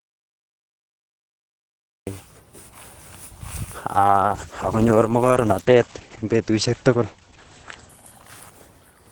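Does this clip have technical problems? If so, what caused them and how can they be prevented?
Yes. From the start until 2.07 s there is an audio dropout to silence: pure silence, no room tone. Likely a lost input or stray mute. Check cables and mute states before recording.

From 3.94 s to the end, a call bitrate drop sets in. The rate falls from 32 to 9 kbps, and bandwidth narrows from 20 kHz to 8 kHz. The speech turns muffled and rough, bottoming out for about 2.7 s. A steadier network connection prevents it.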